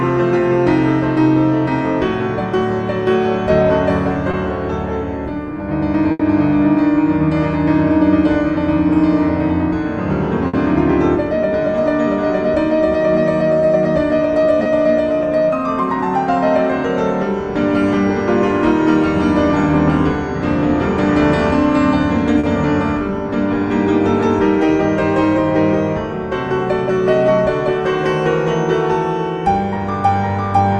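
At 4.31 s a short concealed packet loss occurs: about 20 ms of audio never reached the decoder, so the receiver extended the preceding sound and blended back in, leaving a brief smear or wobble. The same short fill recurs at 14.63 s (20 ms) and 22.39 s (40 ms).

Between these, bursts of packet loss appear at 6.11 s and 10.47 s. Consecutive packets went missing, about 80 ms and 60 ms respectively. The receiver held and faded the last sound across each gap, giving a buzz or hiss before the audio resumes with that stretch gone.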